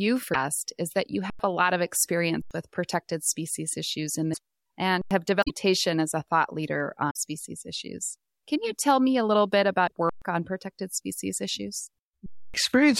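Damaged data in a compressed stream breaks this speech at 0.30, 4.30, 5.40, 7.07 and 9.84 s, as the decoder loses sync and jumps ahead to the next frame. Underrun with held sample occurs at 1.30 s (after "is that you"), 2.42 s, 5.02 s, 10.09 s and 12.26 s: the output buffer empties and the converter holds its last value. The flat stretches last 93 ms at the first three times, which fits a 4096-sample buffer, then 0.12 s and 0.28 s, with live audio lost during each.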